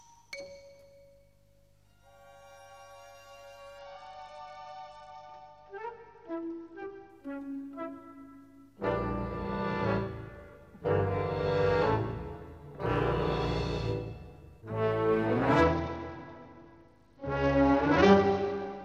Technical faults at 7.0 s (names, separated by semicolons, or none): Bluetooth SBC bit pool drop